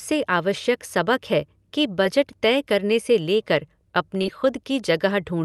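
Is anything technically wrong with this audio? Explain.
Yes, there is short concealed packet loss, in two places.

At 2.04 s, between "आवश्यक सबक है कि" and "तय करने से लेकर", about 10 ms of the call reached the decoder too late. The receiver covered the gap by extending the preceding sound for roughly 5 ms, then blended back into the real signal. The result is a brief smear.

At 4.22 to 4.25 s, just after "तय करने से लेकर", about 20 ms went missing and roughly 21 ms was filled the same way. This gap is longer, so it is heard as a brief wobble, and any short consonant in it can disappear.

All of this passed through a call codec whose top end stops near 12 kHz, which fits Opus at a moderate bitrate.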